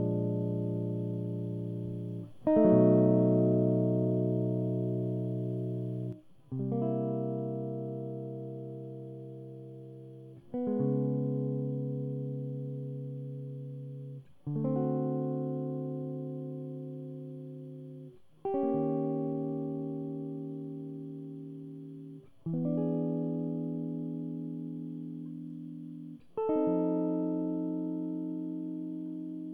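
From 6.13 s to the end, the music steps abruptly down by about 6 dB with no fade, likely because one channel drops out.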